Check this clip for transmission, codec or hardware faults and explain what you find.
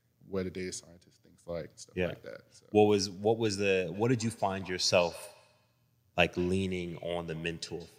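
There is one fault. A feedback echo between two devices runs from 3.94 s to 7.99 s: a second device in the room replays the call, the microphone picks it up again, and its echo canceller can't remove it. The speech returns roughly every fifth of a second, about 22 dB below the speech.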